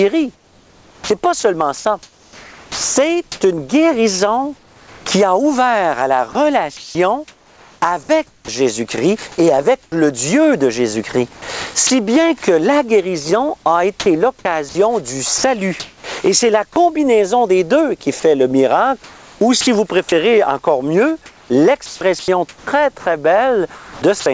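Sound chopped by the voice detector runs from 0.35 to 8.48 s. The sender's detector likely kept switching transmission off and on, so about 3.3 s of the sound is replaced by synthetic fill. Comfort noise in place of the background appears from 9.83 to 9.92 s. During a pause, likely sent as discontinuous transmission, the real background, about 33 dB below the loud parts, gives way to featureless noise about 11 dB quieter for 90 ms. Onset clipped by the voice detector falls at 9.90 to 9.92 s. The detector likely reacted late, so the first 20 ms were never sent and the sound starts abruptly out of the comfort noise. Sound chopped by the voice detector returns from 11.33 to 11.90 s with 120 ms lost, from 14.00 to 16.76 s with 510 ms, from 18.20 to 19.67 s with 450 ms, and from 21.26 to 24.26 s with 1050 ms. Each time, switching in the detector likely turns edges and quiet parts into synthetic fill, all heard through a call path with nothing above 8 kHz, which fits G.722.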